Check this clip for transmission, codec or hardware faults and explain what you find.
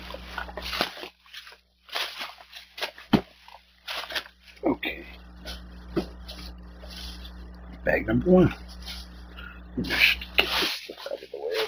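One fault runs through the whole clip. Imaging from linear upsampling is present from start to finish, and the band limit points to a conversion from 16 kHz up to 48 kHz. The new samples were filled in by joining the originals with straight lines, which filters poorly. The top of the original band sounds dulled. A mirrored copy of the spectrum sits between 8 kHz and 16 kHz, roughly 25 dB below the signal, giving a faint metallic shimmer on sibilant and bright high-frequency sounds.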